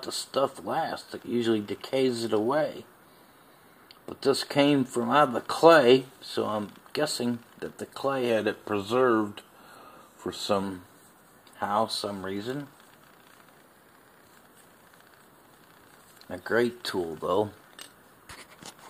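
From 8.30 to 10.63 s the sound sags about a semitone (106 cents) and runs 5.9% slow. From 13.65 to 14.22 s it lurches about a semitone sharp (99.5 cents), 5.9% fast. Each is likely a drift correction step: clock-matching software abruptly changed the playback rate to rebalance its buffer.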